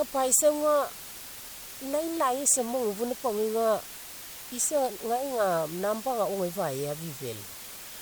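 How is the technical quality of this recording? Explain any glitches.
The technical quality is poor, with one fault that never lets up.

Low bit depth with dither runs from start to finish. The speech is held at about 6 bits, and dither added before rounding turns the coarse quantisation error into steady white noise. That noise sits only around 15 dB below the speech, heard as a loud, even hiss with no crunchy distortion.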